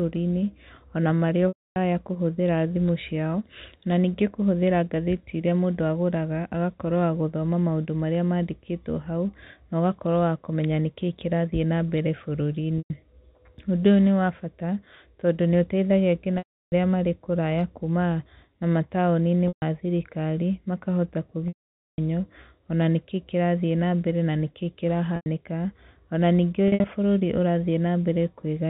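Packet loss with pitch repetition occurs at 1.48, 12.78, 16.38, 19.48, 21.48, 25.16 and 26.68 s, lasting 0.1 to 0.5 s. The receiver loops the last pitch cycle, so short gaps buzz like a held tone, while the 0.28, 0.34 and 0.5 s losses fade to silence. A plain dropout would cut straight to silence instead.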